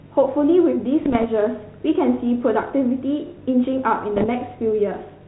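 Bit errors on the ADPCM link derail the decoder's step size and predictor at 1.02 to 1.27 s and 4.16 to 4.30 s, breaking the speech into pops and rough bursts.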